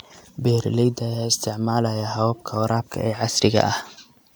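Nothing faulty can be heard.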